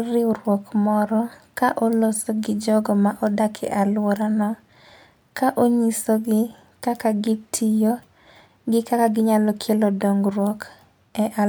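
No technical faults are audible anywhere in this recording.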